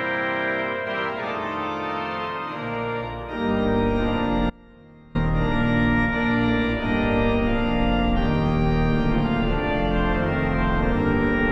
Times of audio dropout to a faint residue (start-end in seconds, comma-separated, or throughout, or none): 4.50-5.15